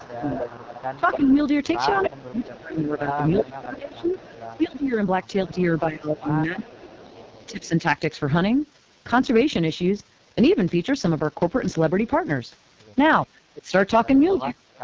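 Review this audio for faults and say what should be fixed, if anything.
The AMR wideband (HD Voice) codec runs throughout at heavy damage. The rough, raspy texture points to the lowest rate, around 6.6 kbit/s. A spectrogram shows a hard ceiling near 7.3 kHz. Encoding at 12.65 kbit/s or higher would prevent this.

Speech suppressed in double talk, likely from an echo canceller ducking both talkers, appears from 0.0 to 7.84 s, with about four seconds affected and drops of about 20 dB. It returns from 13.5 to 14.66 s, about half a second, dropping about 30 dB. The waveform envelope shows abrupt holes. Better double-talk detection in the echo canceller would prevent this.

Echo leak appears at three points. From 0.02 to 5.6 s there is a delayed copy 301 ms late, about 15 dB down. From 6.6 to 7.68 s the copy is 311 ms late, and from 14.26 to 14.79 s it is 328 ms late, both about 25 dB down. 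On a spectrogram this shows as faint, repeated harmonic traces. Stronger echo cancellation or a headset at the far end would prevent this.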